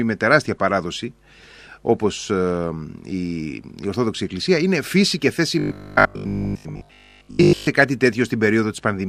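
At 1.38 to 1.85 s, DAB burbling: bit errors, at a rate of around half a percent, slipped past the error correction into the MP2 stream, so corrupted samples added short noise blips and corrupted scale factors made individual sub-bands leap in level for up to a frame. The speech picks up a bubbling, squelchy texture with little chirps.

From 5.59 to 7.67 s comes robotic sound from repeated short buffers. Audio likely arrived too slowly, so the player looped the last block of audio in place of essentially all the real signal. The 50 Hz buzz fits a 20 ms buffer being replayed, imposing a fixed, metallic pitch that only loosely tracks the speech.

Inside that stretch, at 6.42 to 6.69 s, DAB burbling returns more faintly, with an error rate of around a tenth of a percent, adding a few watery blips on top of the buzz.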